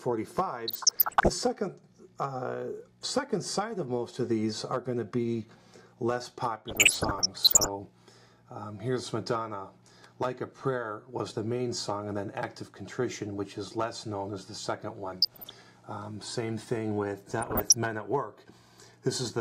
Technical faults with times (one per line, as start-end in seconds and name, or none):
0.68-1.30 DAB burbling
6.68-7.69 DAB burbling
15.21-15.61 DAB burbling
17.29-17.74 DAB burbling